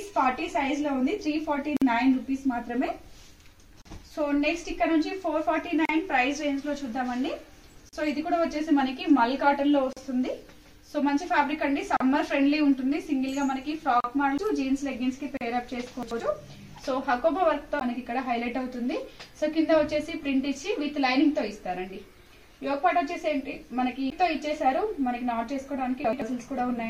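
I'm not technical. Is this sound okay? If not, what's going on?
No. Three kinds of fault are audible.

Gap at a join of encoded pieces: brief silent holes of about 50 ms at 1.77 s, then about 38 ms at 3.82, 5.85, 7.89, 9.93, 11.97, 14.00 and 15.37 s. The sound resumes exactly where it stopped.

CD skip: at 14.38, 17.80 and 24.10 s, a tiny mute, then the sound jumps to a different spot instead of continuing.

Chunks out of order: from 16.03 to 16.20 s and from 26.05 to 26.22 s, an 85 ms piece plays one slot late. Nothing is missing, but the order is swapped, giving a jumbled moment.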